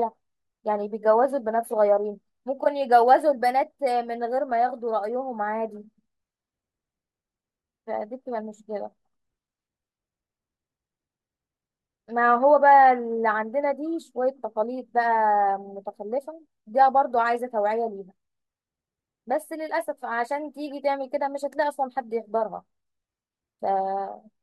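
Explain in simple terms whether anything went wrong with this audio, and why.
Nothing went wrong here: the speech recording carries no audible technical faults at any point, with the signal holding steady and intact throughout.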